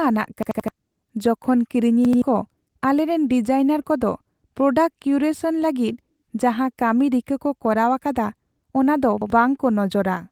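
Repeated buffers stutter the speech at 0.43–0.68 s, at 2.05–2.22 s just before "ᱠᱚ ᱟᱞᱮᱨᱮᱱ ᱰᱤᱡᱟᱭᱱᱟᱨ", and at 9.22–9.30 s. Late audio made the device replay an 85 ms piece, which fits a 4096-sample buffer. The waveform shows identical blocks with hard joins, and the spectrogram shows copied slices with vertical seams.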